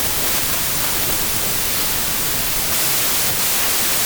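From start to finish there's a wrong sample width fault: the speech sits buried under loud harsh noise, running at about two-thirds speed and pitched down, which fits packed 24-bit samples being read as 16-bit, so many values are built from mismatched bytes.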